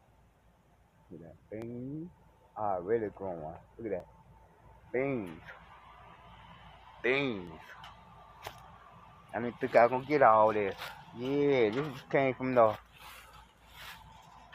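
Sharp, isolated clicks land at 1.62, 4.00, 7.47 and 10.04 s, each a thin vertical line across the spectrum. They are likely dropped samples: roughly 0.7 ms of the stream goes missing, so the waveform jumps abruptly from one value to a later one.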